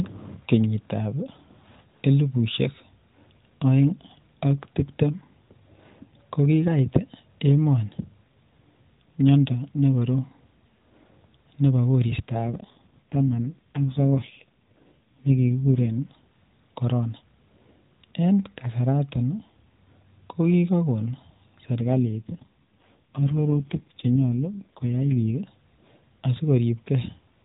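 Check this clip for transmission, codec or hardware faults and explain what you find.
The clip has two AMR rate drops, at 12.46 to 15.91 s and 21.80 to 25.32 s. The speech arrives through narrowband AMR, with nothing above 4 kHz and light codec colouring. In each drop the network told the encoder to spend fewer bits on speech and more on error protection. The sound fits a fall from 12.2 to 4.75 kbps. The band stays the same and there is no gap. The voice turns buzzy and synthetic, then recovers.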